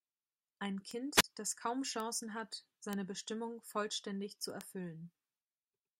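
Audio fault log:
0.91 s to 4.61 s, bit error spikes: four isolated ticks, at 0.91 s just before "das kaum", at 2.00 s, at 2.93 s and at 4.61 s just after "vollständig zu". Each is a single sample, except the two-sample spike at 4.61 s. They peak near about -23 dBFS, with the 2.93 s tick at about -17 dBFS. A flipped bit jumps the sample value by a power of two and then returns, so each click is broadband and unrelated to the speech.
1.15 s to 1.24 s, wireless microphone squelch dropout: just before "das kaum", the speech briefly gives way to rising hiss, then a hole of near silence lasting about 35 ms before the signal returns. The analogue FM link faded until the receiver's squelch gate muted its output. The hiss comes from the weakening carrier, and the gap is the squelch cutting the audio.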